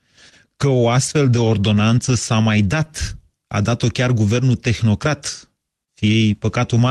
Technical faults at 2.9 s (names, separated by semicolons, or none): short stall from a late packet